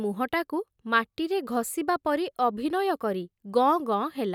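No technical faults are audible.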